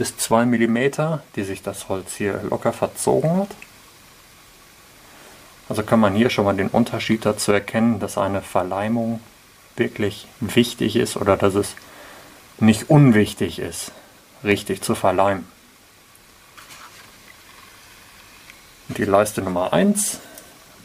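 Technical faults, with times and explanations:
13.49–17.59 s: periodic USB or driver dropouts. A stalled driver silences about a millisecond every 1.02 s, giving strictly even ticks, unlike randomly spaced clicks.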